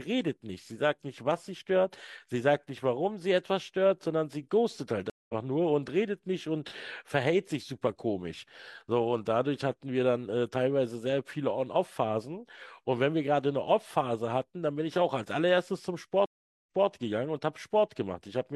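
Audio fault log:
5.10–5.34 s, stream reconnect: a dead gap of 193 ms, then playback picks up roughly 150 ms further on, so a sliver of speech is skipped. On a waveform it shows as a flat gap; the spectrogram shows a blank vertical band whose far edge fades in as the fresh decoder starts.
16.26–16.88 s, stream reconnect: a longer 412 ms dropout, after which the stream resumes 213 ms earlier, so that stretch of speech repeats. It appears as a flat gap followed by a short fade-in.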